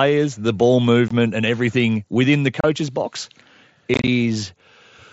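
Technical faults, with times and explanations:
1.08–1.11 s, 2.61–2.64 s and 3.94–4.08 s, unconcealed Bluetooth headset packet loss: wideband mSBC speech drops into hard-edged silent gaps of 22.5 ms and 30 ms, then 67.5 ms scattered across 135 ms as choppy crackle. The gaps fit lost 7.5 ms packets that were never filled, so nothing is smeared or repeated.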